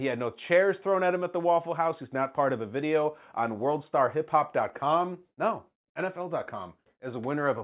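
Nothing to flag here, as the speech runs along without a single technical fault turning up anywhere in it.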